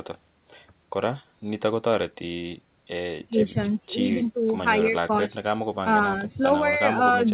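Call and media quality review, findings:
No call or media quality findings in this speech clip.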